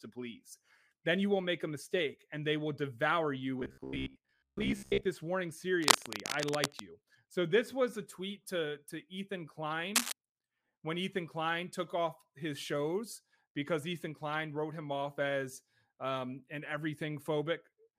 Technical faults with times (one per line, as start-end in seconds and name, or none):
3.60-5.07 robotic sound from repeated short buffers
5.81-6.96 cable scratch noise
9.95-10.12 cable scratch noise